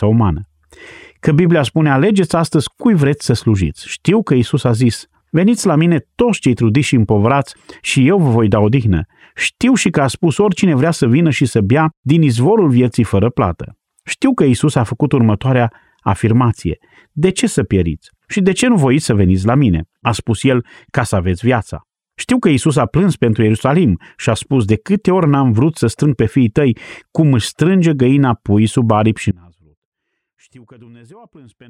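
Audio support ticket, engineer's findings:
Likely upstream signal loss with downstream path still live: audio dropout to a faint residue from 29.31 s to end of clip, after "pui sub aripi și". Speech cuts abruptly; only faint sound remains, about 30 dB below normal level.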